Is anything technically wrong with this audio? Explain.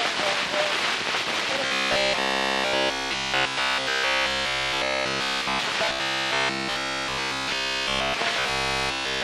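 Yes. Robotic sound from repeated short buffers runs from 1.66 to 5.60 s, 5.85 to 8.14 s and 8.39 to 9.23 s, with essentially the whole of each stretch affected. The likely cause is audio arriving too seldom, so the same fragment of about 15 ms is looped in place of the skipped material. This sets a rigid 66.8 Hz metallic buzz. Unlike codec warble, that pitch stays fixed in every span.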